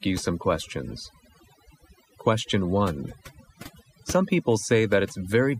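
A noise reduction stage set far too aggressively runs across the whole clip, from start to finish, giving overdone noise removal. Whenever a frequency band sits close to the tool's noise estimate, it is pushed deep down or cut out entirely, and the softer parts of the speech are caught along with the noise. The gaps between phrases drop to near silence scattered with twinkling specks.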